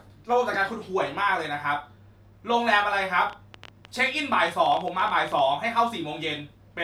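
From 3.30 s to 5.40 s a train of clicks ticks over the speech, about twenty sharp pops of much the same shape arriving at an uneven pace, around 10.5 per second, and peaking a few decibels above the speech itself, so they stand out in the gaps as well. The pattern of repeated, near-identical pulses is likely interference from nearby equipment or a faulty connection or power supply injecting bursts into the signal.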